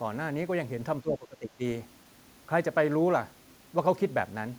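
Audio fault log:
1.02–1.62 s, speech suppressed in double talk: the talker's level falls away sharply, sinking by roughly 20 dB at its deepest, and the sound thins and drops out in patches for about half a second in total before recovering. This is likely an echo canceller meeting simultaneous talk from both ends; unable to tell the near talker apart from the returning loudspeaker echo, it clamped down on everything it picked up, taking the wanted speech with it.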